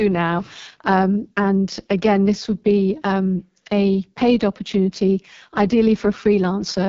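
From start to finish the speech has passed through the AMR wideband (HD Voice) codec, and the heavy damage points to its lowest 6.6 kbit/s mode. At that rate the vocal tract model and its pulse excitation are coded too coarsely, so the speech turns rough and raspy, with a gritty, buzzing edge. Only shaped noise fills the band from 6.4 kHz upward, and there is no content above about 7.3 kHz.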